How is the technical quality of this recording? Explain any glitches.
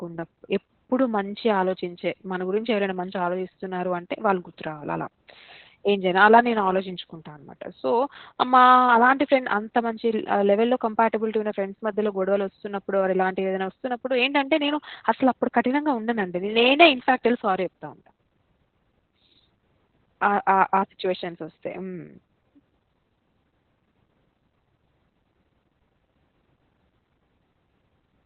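Poor: heavy Opus voice compression runs through the whole speech clip. The encoder appears to have fallen back to its narrowband SILK linear-prediction mode at a bitrate around 8 kbps, discarding everything above 4.2 kHz and coding the excitation coarsely, so the speech sounds muffled, hoarse and faintly robotic.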